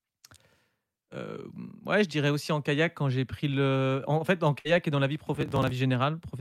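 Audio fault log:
4.59 to 4.67 s, burst of packet loss. A short run of speech packets failed to arrive in time. The receiver extended the last sound it had for about 54 ms, letting it fade as the gap went on. The speech then picks up again slightly further along, with about 60 ms never heard. The result is a brief held smear followed by a small jump, so the flow of speech stumbles for an instant.
5.35 to 5.71 s, processor overload crackle. For about a third of a second the processor could not finish its small audio buffers on time, over and over. Each missed deadline was skipped outright, so the speech jumps forward by a tiny slice with a hard edge. The buffers were roughly 5 ms long, with around twenty misses. Those rapid jumps merge into a gritty tearing crackle over the voice, which stops once the load eases.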